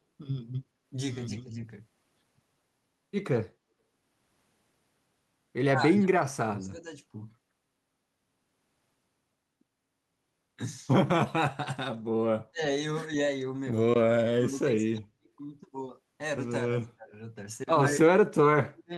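Speech suppressed in double talk, likely from an echo canceller ducking during overlap, dips the voice at 1.42, 5.71–6.86, 12.5, 14.33–15.28, 16.66–17.13, 17.91–18.28 and 18.55–18.93 s. The first is shallow, about 5 dB; the rest cut out by about 30–40 dB, showing as near-empty spectrogram gaps and collapsed waveform envelope.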